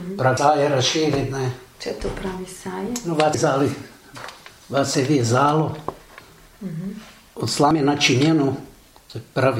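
At 0.37, 3.34 and 7.71 s the sound jumps ahead, losing roughly a fifth, three tenths, then a tenth of a second: likely dropped buffers from an overrun.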